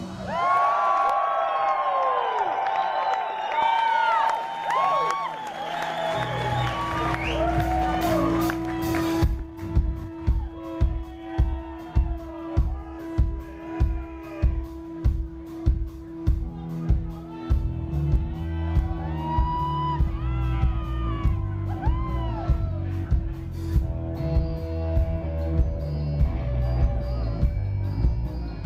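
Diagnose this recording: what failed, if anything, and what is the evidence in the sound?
Audio was dropped in transit or by the receiver's jitter buffer, producing a skip ahead at 3.53 s. Roughly a second of sound is missing, and playback jumps straight across it with no fill, so the material on either side is butted together almost seamlessly.

Afterwards the jitter buffer, holding more than its target, ran a jitter buffer speed-up by cutting pitch-period-sized slices. The sound runs fast at unchanged pitch: 105% at 3.66–4.38 s, 108% at 4.93–5.54 s, and 111% at 9.09–12.98 s, where nearly half a second is trimmed.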